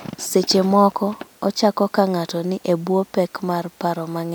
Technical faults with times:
none

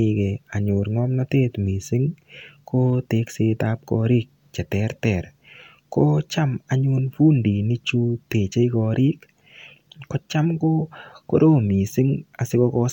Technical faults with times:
none

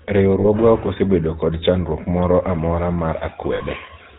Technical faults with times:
0.00-4.18 GSM full-rate codec
0.40-0.45 lost GSM frames
3.54-3.61 lost GSM frames

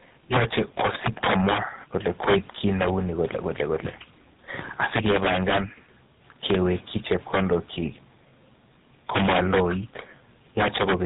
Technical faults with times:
0.00-11.06 tandem speech coding

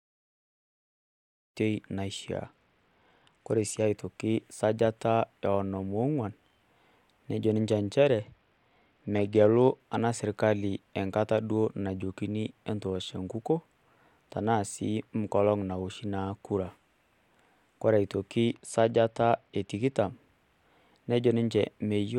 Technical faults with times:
2.45-3.86 Bluetooth SBC bit pool drop
8.20-9.80 Bluetooth SBC bit pool drop
18.48-19.98 Bluetooth SBC bit pool drop

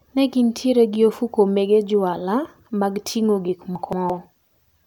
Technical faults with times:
3.75-4.10 chunks out of order

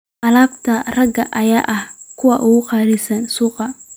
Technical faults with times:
none

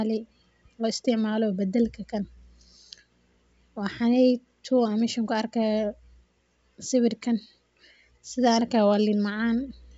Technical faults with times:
none

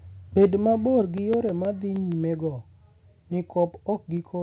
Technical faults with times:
0.40-0.45 microphone overload
0.86-2.12 CD scratch ticks
1.02 microphone volume stepped down
4.17 microphone volume stepped down

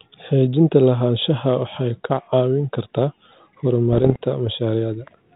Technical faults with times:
3.93-4.16 bit errors on an ADPCM link

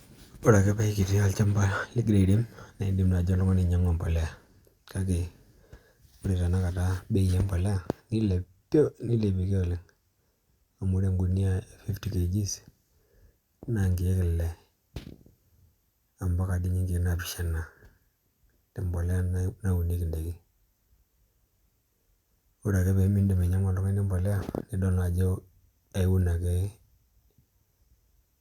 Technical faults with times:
none

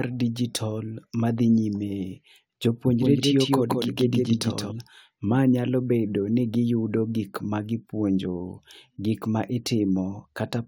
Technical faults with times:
3.02-4.72 doubled audio track

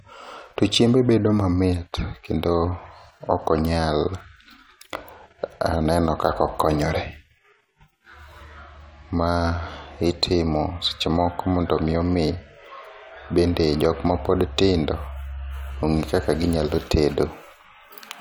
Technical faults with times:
none

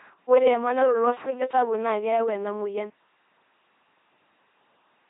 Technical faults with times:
0.00-5.09 LPC-10 vocoder

